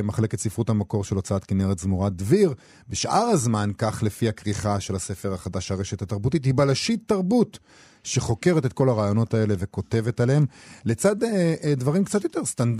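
No technical faults are audible.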